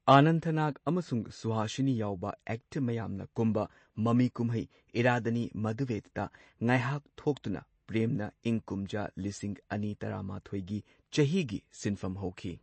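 MP3 compression damage runs throughout the speech, likely from an MP3 encode at a bitrate that fits 32 kbps. The encoder has removed everything above 8.3 kHz and left weak frequency lines flickering between frames, so the sound is dull, watery and swirly.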